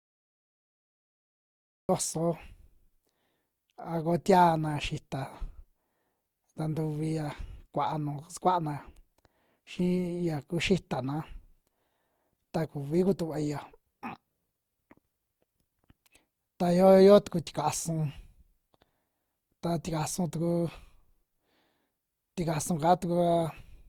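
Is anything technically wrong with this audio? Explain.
Yes, there are two problems.

Throughout the speech the sound is swirly, smeared and hollow, with blurred consonant onsets. The likely cause is generation loss: the audio appears to have been through a lossy codec about three times, with a character that fits Opus at around 48 kbit/s. Each pass re-quantises on a shifted frame grid, so noise accumulates. A spectrogram would show smeared transients, with nothing above 20.2 kHz.

At the start there is a cut-off start. From 0 to 1.89 s the audio is digital silence, then at 1.89 s it begins abruptly in the middle of a sound because the recording or stream started late. There is no natural attack or fade-in. On the waveform, a flat line jumps straight into the sound at 1.89 s, and the spectrogram shows a hard vertical edge there.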